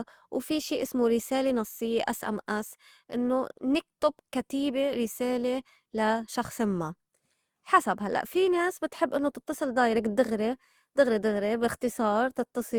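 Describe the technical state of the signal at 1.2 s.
At 1.2 s the speech sounds swirly, smeared and hollow, with consonant onsets blurred rather than crisp, more degraded than the bandwidth would suggest, since content still reaches about 20 kHz. This is generation loss, present throughout the clip rather than at this moment alone. The likely cause is repeated lossy encoding, around four passes, in a way that fits Opus at 64 kbit/s. Each pass requantises on a shifted frame grid, so noise accumulates.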